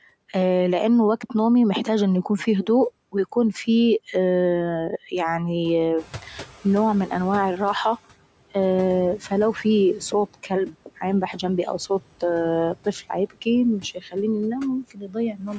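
A speech recording with noise suppressor artifacts running through its whole length. The suppressor pulls the background down by about 17 dB, working frame by frame across frequency bands. So the noise floor dips in the gaps between phrases and swells back under the talking.

At about 6.0 s the room noise jumps by about 13 dB. It still sits about 19 dB below the speech. From 5.96 to 7.76 s the noise suppressor is catching up. Its noise estimate lags the sudden rise, so the louder background first comes through with only about 12 dB of reduction. Over roughly 1.8 s the estimate adapts and the noise settles back down.

Near the end the noise suppressor cuts speech. From 13.83 to 14.14 s, parts of the voice are pushed down by up to about 12 dB. That affects only around a tenth of a second in total. From 14.91 to 15.16 s, it drops by up to about 13 dB over roughly 150 ms. The suppressor has mistaken quiet speech detail for noise. 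Those moments sound swallowed and faint. The call's microphone processing limits the band to 8 kHz, and nothing is heard above it.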